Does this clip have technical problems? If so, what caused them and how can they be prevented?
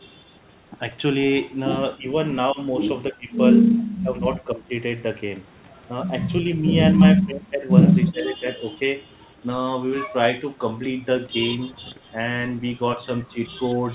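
Yes. Speech suppressed in double talk hits the speech at 1.97–2.06, 2.53–2.59, 3.11–3.34, 4.03–4.72, 7.17–7.67 and 8.11–8.59 s. Each time the level sinks by roughly 10 to 20 dB, deepest at 7.17–7.67 s. The likely cause is an echo canceller that could not separate this talker from loudspeaker echo while the far side spoke, so it turned both down. Better double-talk detection, or a headset, prevents it.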